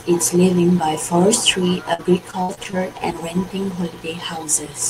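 From 1.93 to 2.75 s, repeated packet loss (robotic sound) chops the speech: six gaps, longest 62 ms, each patched by extending prior audio, giving choppy output with pieces missing.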